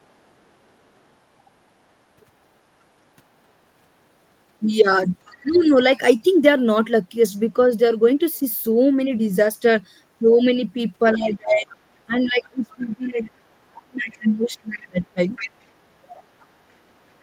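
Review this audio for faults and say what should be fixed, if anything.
Other side's voice leaking through: a faint second voice sits under the speech at 5.26–5.76 s and 11.15–13.31 s, around 30 dB below it, and louder, about 20 dB down, from 14.81 s to the end. The likely cause is the far end's loudspeaker playback reaching the microphone and escaping the echo canceller. It differs from the suppression fault because a separate voice is added, rather than the main talker losing level. Fixing it needs stronger echo cancellation or a headset in place of the loudspeaker.

Speech suppressed in double talk: the talker's level dips by about 20 dB at 5.42–5.71 s, and by about 25 dB across 11.13–15.31 s, for roughly 3.3 seconds in total. The likely cause is the echo canceller turning everything down while both sides talk at once. Unlike a network dropout, these dips line up with the leaked voice. 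A canceller with better double-talk detection would prevent it.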